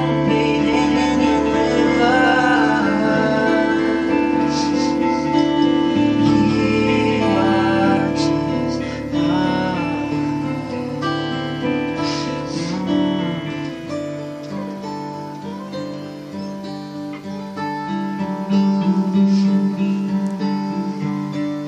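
From 0.73 s to 7.97 s the audio is doubled: a second full-band copy trails the original by about a fifth of a second, roughly 5 dB quieter, with no decay or room colour. It likely comes from an extra, slower capture path. On a spectrogram every event appears twice, shifted; the copy starts and stops abruptly.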